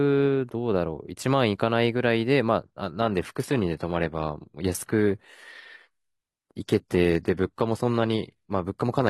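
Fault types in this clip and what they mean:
Adaptive stream at a lower bitrate: from 3.01 s to the end, the speech abruptly loses its crisp top end, with the treble turning thin and synthetic and compression artefacts becoming audible, yet the audio never breaks or pauses. The player switched mid-stream to a lower-quality version when the connection slowed. The sound points to a drop from roughly 96 kbit/s AAC to a 20 kbit/s HE-AAC rendition that rebuilds the high frequencies artificially.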